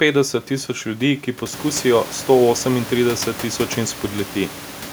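The speech signal has no technical faults, and the room noise that rises by about 14 dB around a second and a half in is part of the recording itself, staying about 17 dB below the speech.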